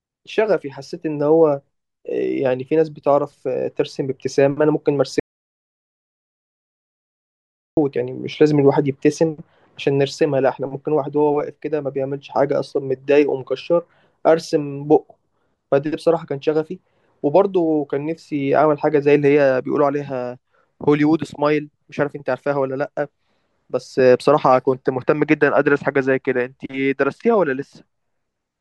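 The input feeding the recorder was likely cut off for a moment, whether by a disconnected device, a failed link or an accidental mute, while the recorder kept writing silence. The result is an audio dropout to silence from 5.20 s to 7.77 s: the speech stops abruptly mid-flow, about 2.57 s passes in silence with no room tone at all, and then the speech resumes just as suddenly, with that stretch lost entirely.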